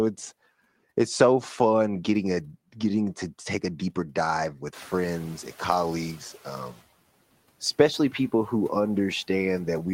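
At 4.74 s, just after "a deeper dive with", the noise suppressor is catching up. Room noise jumps by about 19 dB near 4.5 s. The suppressor's estimate lags, so the noise first comes through with less reduction. Over 2.01 s, until 6.75 s, it sinks by about 9 dB.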